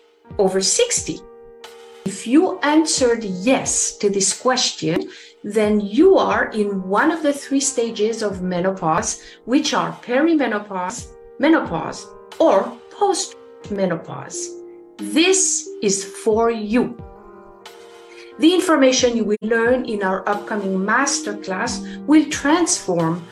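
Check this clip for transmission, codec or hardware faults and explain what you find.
One fault: AAC frame loss with muting at 19.34–19.44 s. The decoder zeroed the missing spectrum, and the overlapping windows fade the sound out and back in. This leaves a soft-edged gap of about 85 ms, consistent with two lost frames. On a spectrogram it is a blank vertical band. In the waveform the envelope tapers to silence and swells back.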